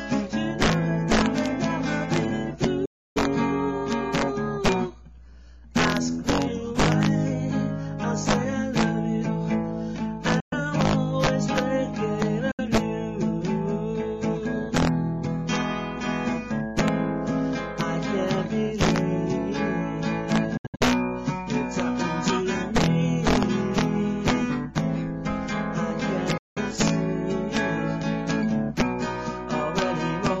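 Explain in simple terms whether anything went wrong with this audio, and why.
The sound cuts to silence five times, at 2.85, 10.40, 12.51, 20.57 and 26.38 seconds, then carries on as if it had kept playing. These are likely Bluetooth dropouts, where the headphones missed some of the audio data. The longest gap lasts about 0.3 seconds. Around 20.6 seconds the gaps are short and scattered.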